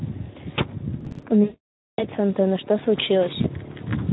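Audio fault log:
throughout: Speex codec. The speech runs through Speex at a bitrate around 11 kbps, where the CELP excitation gets too few bits, so the speech comes out audibly noisy and hoarse.
1.01–1.23 s: processor overload crackle. Around ten consecutive buffer deadlines are missed. Each miss skips a short piece of audio, which fits buffers of about 5 ms, and leaves a hard-edged gap. The run of gaps is heard as a gritty burst of crackle over the speech.
1.44–2.07 s: VoIP packet loss concealed by the speech codec. About 540 ms of audio is missing, and the decoder keeps extrapolating from its last pitch and filter while the gain drops. The speech stretches and fades, and stays weak briefly after it returns.
3.42–3.48 s: VoIP packet loss concealed by the speech codec. A single 20 ms frame is lost and the decoder fills the gap by extending the previous pitch and spectrum. The result is a brief smeared blip, followed by weakened speech for a few tens of milliseconds.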